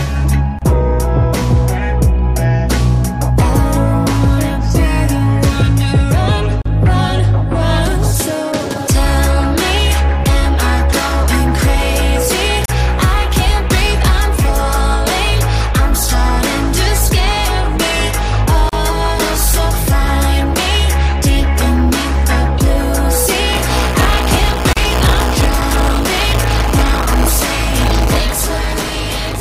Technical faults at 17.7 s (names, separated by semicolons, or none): none